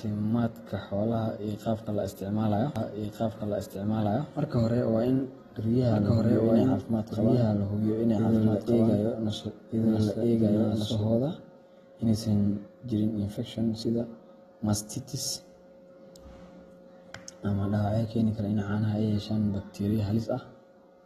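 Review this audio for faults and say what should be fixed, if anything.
AAC compression throughout: the speech is dull and smeared, with nothing above 13.8 kHz, likely from AAC-LC at a low bitrate, which fits around 24 kbps. Encode at a higher bitrate or keep an uncompressed master.

Doubled audio track from 2.76 to 11.08 s: a second full-band copy at roughly equal level trails by about one and a half seconds, starting and stopping abruptly, likely from a duplicate capture path or a misaligned edit. Make sure only one capture path feeds the mix and check edits for overlapping copies.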